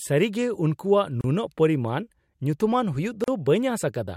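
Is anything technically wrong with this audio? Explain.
Yes, there are two gaps at joins of encoded pieces in this speech. The first runs from 1.21 to 1.24 s (about 30 ms), and the second from 3.24 to 3.28 s (about 38 ms), two seconds apart. The speech looks like it was encoded in two-second chunks and stitched together without trimming, so each chunk's encoder start-up delay and padded last frame stay in. You hear a short dropout, its edges smeared by the codec, then the speech picks up right where it left off.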